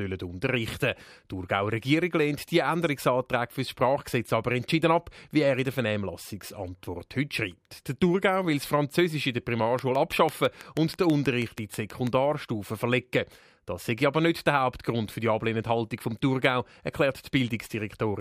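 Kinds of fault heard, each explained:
Train of clicks: from 9.79 to 12.08 s a steady ticking sits over the speech, about six clicks per second at an even spacing, roughly fifteen in all. Each pulse has much the same sharp shape and peaks around 10 dB above the speech, so the clicks cut through both the speech and the gaps between phrases. Such a regular, repeating pulse most likely comes from electrical interference from nearby equipment or a faulty connection or power supply.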